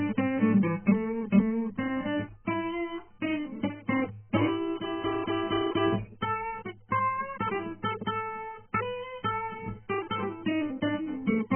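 Music, with heavy AAC compression damage throughout. Nothing sounds above about 3.1 kHz, and the sound is dull and smeared. This likely comes from AAC-LC at a very low bitrate, around 10 kbps.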